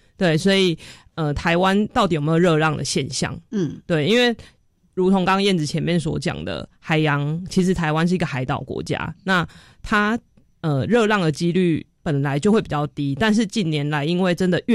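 No technical faults can be heard in this recording.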